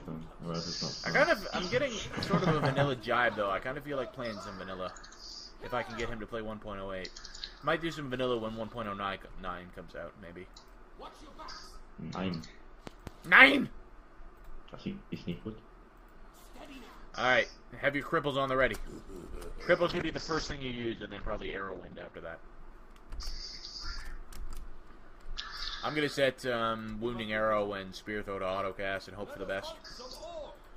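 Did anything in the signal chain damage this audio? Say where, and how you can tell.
Yes, in two places. Between 12.87 s and 13.10 s there are two sharp pops, about 10 dB above the surrounding level, with the sound continuing unbroken beneath them. The pair of pops points to a voltage step in the analogue wiring, likely a connector or switch transient shaped by the circuits downstream. That sets it apart from a digital dropout click, which would interrupt the signal rather than sit on top of it.

From 19.91 s to 22.21 s the audio turns rough and muffled, the signature of a call bitrate drop in the call's network and codec path. The encoder fell from 48 kbps to 8 kbps, stayed at that floor for about 2.2 s, and narrowed its bandwidth from 20 kHz to 8 kHz, so the top end vanishes and the sound goes coarse. Packet loss would leave gaps or stutters. Here the signal stays continuous but degraded until it recovers.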